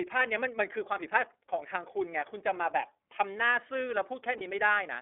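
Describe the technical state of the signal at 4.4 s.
At 4.4 s, a single lost iLBC frame falls between 4.38 and 4.42 s, a gap of about 30 ms that fits one 30 ms frame going missing in transit. The decoder filled the hole by repeating the last pitch cycle blended with noise, so the moment sounds like a brief held, faintly buzzy vowel. Because each iLBC frame is decoded without depending on its predecessor, the speech is back in shape immediately after.

Beneath that, the whole clip has passed through the iLBC codec. Its coding fits the 13.33 kbps, 30 ms frame mode. The line band runs from 300 Hz to 3.5 kHz, so nothing above 3.5 kHz or below 300 Hz survives. The excitation coding leaves plainly audible damage, a rough, somewhat synthetic edge on the voice around this point as everywhere else.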